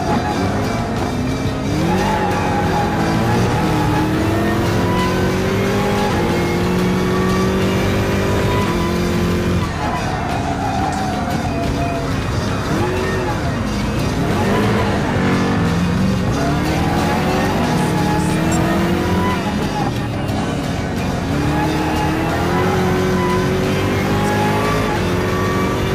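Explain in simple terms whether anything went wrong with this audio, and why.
Something did go wrong here, and it lasts the whole clip: hard clipping. The sound was pushed louder than one stage of the recording chain could handle, so the tops of the loudest moments got sliced off flat instead of rounding over naturally. Those flattened peaks add a gritty, buzzy edge, so every loud moment carries a harsh fuzz rather than an occasional crackle. Only a small slice of the audio actually hits the ceiling, but it keeps hitting it from start to finish.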